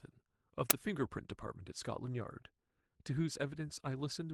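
At 0.70 s there's an uninitialised buffer: a block got played before any audio was written into it, so leftover memory came out as samples. You hear a sharp, loud crack of digital noise lasting about 10 ms, which fits one 10 ms block.

Then from 1.01 to 1.07 s the speech turns rough and grainy. That's a lost packet rebuilt from error correction. The following packets carried low-bitrate backup copies, and the decoder played those instead, so there's no gap. About 40 ms was rebuilt this way, which points to two lost packets.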